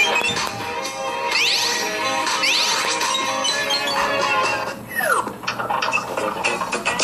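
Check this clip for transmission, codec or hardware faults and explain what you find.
One fault is audible: compressed frames skipped, at 2.42 s. Here the audio jumps forward by about 200 ms. That fits around seven whole frames of roughly 26.1 ms each being dropped, either missing from the stream or rejected by the decoder as damaged. The material in that gap never plays. At the join the sound lurches ahead.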